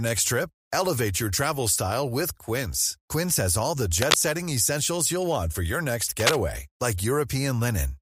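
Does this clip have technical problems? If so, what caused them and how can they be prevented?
Yes. Cable scratch noise appears from 3.98 to 4.15 s, slightly louder than the speech, and from 6.20 to 6.37 s, at about the speech's level. The cause is likely a worn cable or connector shifting, its contact resistance fluctuating into dense, ragged bursts. Secure and replace worn cables and connectors before recording.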